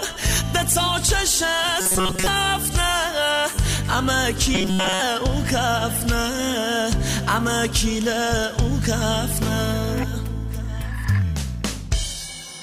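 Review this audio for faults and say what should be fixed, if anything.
Robotic sound from repeated short buffers occurs at 1.81–2.27 s and 4.55–5.01 s as a rigid metallic buzz at 188 Hz, likely from a roughly 5.3 ms chunk being repeated while most real audio is skipped. Larger playback buffers would prevent these underruns.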